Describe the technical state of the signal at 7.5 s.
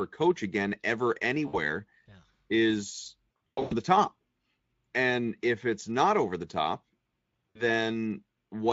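At 7.50 s a run of packets was lost, and the speech codec's packet loss concealment filled the roughly 60 ms gap, consistent with three 20 ms frames. The decoder kept repeating its last pitch and spectral shape at falling gain, so from 7.50 to 7.61 s the speech stretches into a fading buzzy tone or coloured noise. Because each decoded frame depends on the previous one, the sound stays weak and smeared just after the packets resume, against the light Speex coloring elsewhere.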